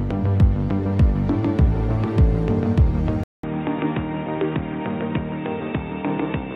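At 3.24 s the audio cuts to about 0.2 s of silence, then returns duller and boxier through to the end, most likely because the input switched to a poorer device. On a spectrogram, energy above about 3.8 kHz vanishes at that point, leaving a hard ceiling. A new steady noise floor appears roughly 35 dB below the signal. The waveform shows a brief flat gap and then an envelope sitting around 5 dB lower.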